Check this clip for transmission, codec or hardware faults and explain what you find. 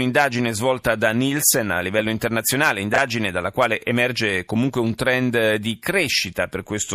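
One transmission fault is present: chunks out of order, from 2.94 to 2.98 s, between "a livello internazionale" and "dalla quale emerge comunque". A 20 ms chunk arrived one chunk late and played after its successor, so nothing is lost but three hard joins produce a brief jumbled stutter.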